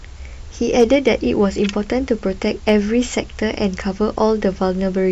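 From 0.78 to 1.1 s, and again from 2.68 to 2.75 s, the speech hits hard clipping: peaks run about 2 dB past what a stage can pass, so they're sliced flat. That adds harmonics up top, heard as a brief crackle on the loudest moments.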